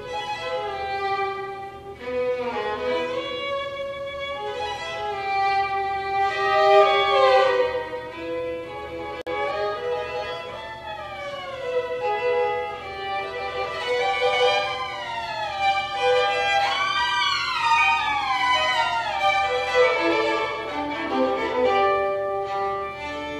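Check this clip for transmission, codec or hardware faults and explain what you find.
One fault: a gap at a join of encoded pieces at 9.22–9.27 s. A 52 ms gap cuts continuous sound with smeared edges, then resumes where it stopped: untrimmed encoder delay and frame padding at a splice.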